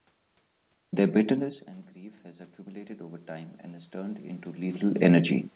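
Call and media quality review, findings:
Automatic gain rising, 2.22 to 4.87 s, right after "bitterness and grief". Level drops about 18 dB at the capture side, then the AGC in the call microphone processing ramps its gain up by about 10 dB over roughly 2.6 s. Voice and room noise swell together, a slow pumping rise rather than a step. The gain never fully makes up the drop, so the voice stays quieter than before. Narrowband call audio, nothing above 4 kHz.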